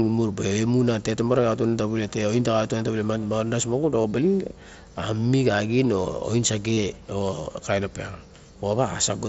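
At 4.02 to 4.04 s and again at 6.73 to 6.77 s, concealed Bluetooth headset packet loss fills the gaps with a repeated recent waveform. That gives a short buzzy, level-held tone rather than the silence or click of plain dropouts.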